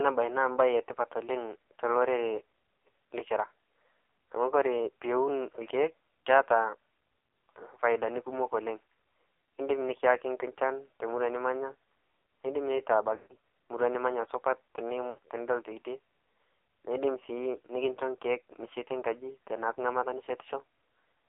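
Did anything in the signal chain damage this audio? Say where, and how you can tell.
Yes. At the codec stage, the whole clip shows AMR narrowband mobile codec damage. Speech is confined to 300 Hz–3.6 kHz and sounds heavily buzzy and synthetic, which fits a 5.9 kbps mode. That is steady coding loss, not a transient fault.

At the network stage, there are lost AMR speech frames at 13.16–13.36 s and 15.10–15.18 s. Rather than cutting to hard silence, the sound smears and fades, because the decoder repeats the last pitch and vocal-tract settings at falling gain.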